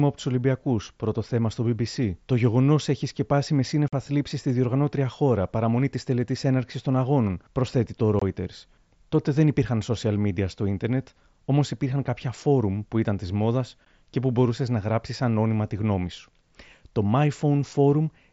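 At 3.88 s, 8.20 s and 13.85 s the speech drops out in short holes of about 45, 22 and 15 ms: unconcealed Bluetooth headset packet loss. Headset voice packets went missing and silence or an idle pattern filled them, so each gap has hard edges.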